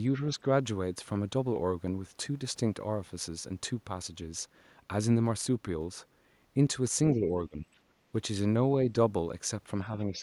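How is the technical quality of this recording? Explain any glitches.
The speech is marred by brief level dips and one faint stray sound. Speech suppressed in double talk occurs at 0.16–0.39 s (about 5 dB), 7.14–7.63 s and 9.87 s to the end (about 10 dB each). The speech ducks, likely because an echo canceller throttled both talkers at once. On a waveform these appear as sudden envelope notches. The other side's voice leaking through appears at 7.73–7.77 s, roughly 40 dB below the speech, likely as residual loudspeaker echo. It shows as a faint smear on the spectrogram.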